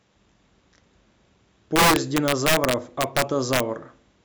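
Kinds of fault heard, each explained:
Integer overflow: from 1.76 to 3.60 s the speech is pushed about 6 dB past the integer limit, and each peak wraps to the opposite sign instead of being held flat. The result is violent, sharp cracks on loud syllables, far harsher than the squared-off distortion of clipping.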